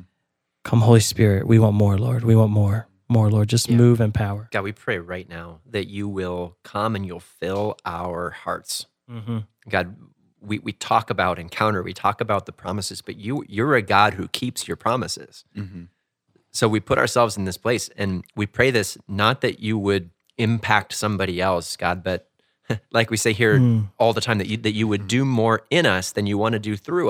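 No technical faults are audible.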